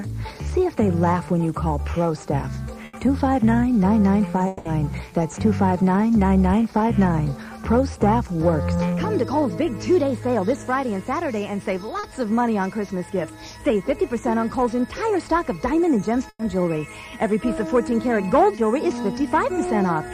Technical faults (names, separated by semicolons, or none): burst of packet loss; long network dropout; short concealed packet loss